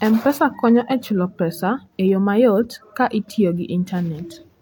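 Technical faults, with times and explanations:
Throughout, low-bitrate audio saved at a high bitrate: the speech keeps the coarse, compressed texture of a heavily squeezed encoding and has nothing above 18.5 kHz, even though the MP3 itself is at a rate that fits 192 kbit/s. The likely cause is an earlier low-rate encode, which fits HE-AAC at about 40 kbit/s, being re-encoded at the higher rate. The second pass enlarges the file but cannot restore what the first one removed.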